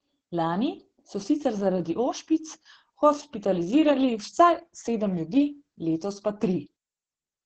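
Opus voice compression runs throughout the speech, with nothing above 9 kHz. The speech coder describes the voice with a coarse model, consistent with roughly 10 kbps, and the heavy damage makes the speech muffled, hoarse and slightly robotic.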